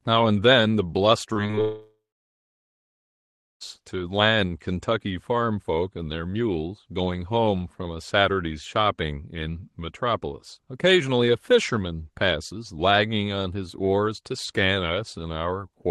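From 1.33 to 1.59 s the sound turns choppy with a robotic edge: repeated packet loss. Four short holes fall within about a quarter of a second, the longest around 19 ms, and each is patched by stretching the preceding audio forward. About 29% of that span, roughly 75 ms in all, is synthesized fill, so pieces are missing and the repeated fragments give the mechanical texture.

Immediately after, from 1.61 to 3.62 s, comes a long network dropout, likely a sustained interruption in delivery. About 2 s of audio never arrives. The receiver first extends the last sound as a fading buzz or hiss, then settles into silence for roughly 1.6 s before the signal resumes further on, with the lost section simply absent. The surrounding audio carries Opus coding texture and a top end limited to about 12 kHz.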